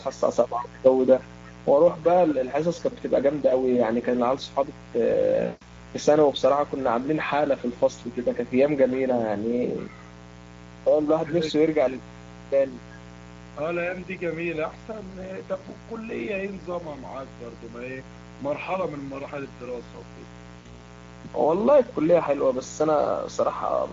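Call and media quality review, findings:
Mains buzz, throughout: steady raspy buzz on 60 Hz harmonics reaching into the kHz range, roughly 20 dB under the speech. Probable component: dimmer, rectifier or unshielded line coupling switching spikes twice per mains cycle into the capture path.

Speex codec, throughout: speech hoarse and noisy, the upper band reduced to a shaped hiss, plainly audible damage. Consistent with a mid-quality Speex mode near 16.8 kbps. CELP excitation is starved of bits, so the fine structure is replaced by noise.

VoIP packet loss concealed by the speech codec, 5.45–5.81 s and 20.59–20.77 s: speech smeared into a fading buzzy tone or coloured noise, then weak or distorted for tens of milliseconds or more after recovery. Fits about 160 ms and 60 ms of lost 20 ms frames, extrapolated from the last pitch and filter state.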